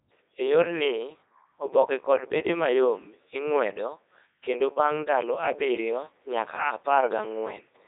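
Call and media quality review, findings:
Robotic, buzzy speech throughout, no content above 3.8 kHz. Codec 2 vocoder on the path, consistent with its 3.2 kbit/s mode: only pitch, voicing, energy and spectral envelope sent, voice resynthesised from sine waves, original waveform lost. Heavy damage.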